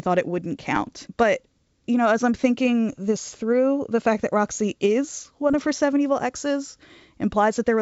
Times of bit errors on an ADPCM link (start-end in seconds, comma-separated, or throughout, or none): 0.74-0.90, 2.93-2.99, 5.53-5.55